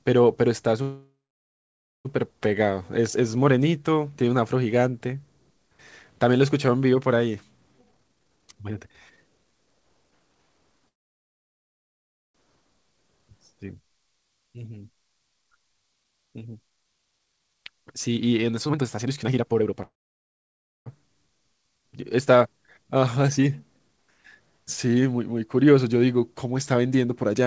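At 0.82 s the speech stops for about 1.25 s until 2.07 s. A brief fading continuation of the last sound gives way to roughly 0.92 s of silence, and the speech then resumes where it left off with nothing lost. This is a call audio freeze. The likely cause is packets held up in transit, so the jitter buffer ran empty, and the pause adds that much delay. From 7.78 to 10.88 s the speech runs at 139% speed with unchanged pitch, a jitter buffer speed-up. Short pitch-period slices are removed repeatedly to drain the extra buffered audio, roughly a second in total, and the speech sounds hurried. A second freeze follows from 10.88 to 12.36 s, fully silent for 1.46 s. A second speed-up runs from 16.04 to 19.82 s at 123%, again removing about a second. A third freeze from 19.82 to 20.88 s holds about 0.96 s of silence after a short fade. A final, milder speed-up from 22.84 to 23.98 s runs at 109%, trimming about a tenth of a second. 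Throughout, the audio contains nothing above 8 kHz, consistent with G.722 at 64 kbps.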